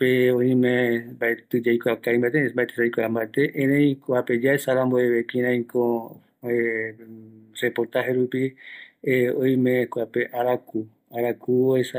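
Throughout the speech, faint ticks recur at a steady 4.0 Hz, every 250 ms, the signature of a resampler restarted on every block during conversion from 48 kHz to 44.1 kHz. Unlike random dropout clicks, these are exactly periodic and vanish in silences.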